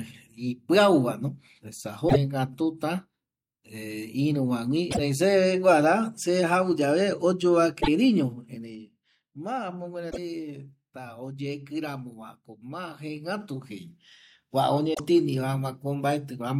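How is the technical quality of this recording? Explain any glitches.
The recording has two kinds of glitch: repeated hiccups from damaged data in the compressed stream, and a couple of stepped, zippery level changes.

Damaged data in a compressed stream hits five times, at 2.05 to 2.16 s, 4.87 to 5.00 s, 7.77 to 7.88 s, 10.07 to 10.18 s and 14.90 to 15.00 s. Each lasts about a tenth of a second. At each spot some bytes of the encoded file went bad, so the decoder misread the frames, lost sync and hunted for the next good frame header. You hear it as a short chirp or squawk.

Zipper noise shows up twice. From 8.26 to 9.03 s the level drops about 10 dB in 2 dB jumps, roughly seven a second. From 12.81 to 14.13 s it climbs back about 10 dB in the same 2 dB jumps, roughly four a second. The gain was changed in coarse steps with no smoothing between them, so every jump puts a tiny click into the waveform. 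Strung together, the clicks come across as a ticking zip riding on the speech while the level moves.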